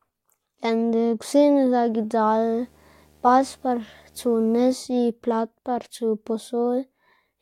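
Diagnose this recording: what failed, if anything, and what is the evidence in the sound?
Video or display buzz runs from 2.25 s to 4.75 s: a steady buzz at 75 Hz with a layer of hash above it, sitting well down, roughly 35 dB below the speech. The failure is in the analogue wiring stage. A monitor or its video cable is coupling interference into the audio path, so the picture's 75 Hz field rate becomes a buzz, and the sharp edges of each field add the hash.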